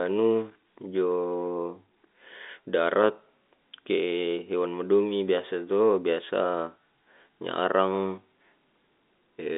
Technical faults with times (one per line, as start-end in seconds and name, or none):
none